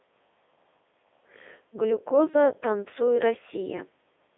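Right from the start and across the whole clip, you can hear the Codec 2 vocoder at work. The speech comes out robotic and buzzy because it's rebuilt from sine waves using just pitch, voicing, energy and spectral envelope, which fits the 3.2 kbit/s mode. It's squeezed into roughly 300 Hz to 3.6 kHz, with nothing above 3.8 kHz.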